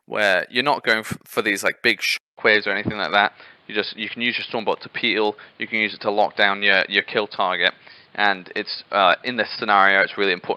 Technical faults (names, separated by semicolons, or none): input switched to a poorer device; short concealed packet loss